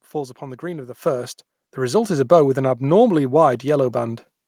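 Microphone volume stepped up at 1.02 s, and again at 2.04 s. Each time, the call software judged the input too quiet and raised the microphone's input volume in a single jump rather than a gradual ramp. The speech and the background noise get louder together at the same instant: about 8 dB at the first step, then a further, smaller rise of about 3 dB at the second.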